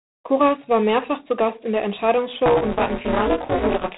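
G.726 ADPCM, from start to finish: each sample is sent as a few bits of difference from an adaptive prediction, and the rasping hiss that rides on the speech level suggests a 24 kbit/s rate. Nothing above 3.9 kHz survives, so the speech sounds narrow and gritty.

Buffer tearing, from 2.46 s to the end: the writer and the reader of the ring buffer have drifted until they cross within every period. About half of each buffer replays audio from roughly 20 ms earlier, producing a robotic 172 Hz buzz that fits a 256-sample buffer.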